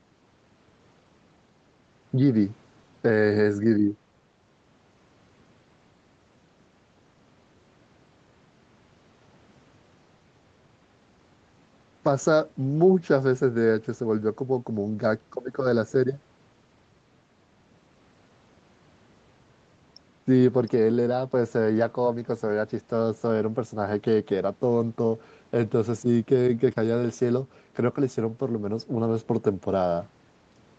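Nothing stood out as a fault on listening to this speech.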